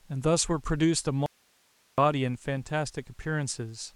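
A speech clip in which the signal path likely lost its source for a moment while the downstream chain stayed live, giving an audio dropout to a faint residue. From 1.26 to 1.98 s, about 0.72 s, the speech cuts off abruptly and only hiss remains, around 40 dB below the signal, before the speech returns just as suddenly.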